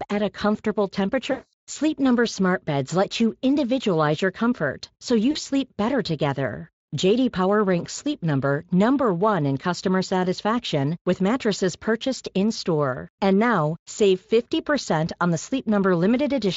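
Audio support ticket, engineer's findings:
VoIP packet loss concealed by the speech codec: stretched tone or coloured noise fading out at 1.31–1.53 s (about 220 ms) after "at a comfortable", short blip at 5.31–5.37 s (40 ms) before "sleep better together". Decoder extrapolating the last pitch and filter with falling gain. Speex underneath sounds only lightly degraded.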